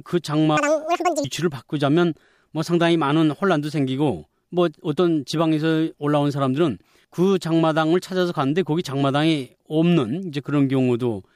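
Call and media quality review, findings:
Audio read two samples at a time (double speed), 0.57 to 1.24 s. Speech runs 2x fast, pitched up 12 semitones (one octave). Probable cause: the decoder or resampler treats sample pairs as one frame, likely from a channel-count or sample-width mismatch. Spectrogram: harmonics shifted up an octave. Waveform: compressed, denser cycles for that span.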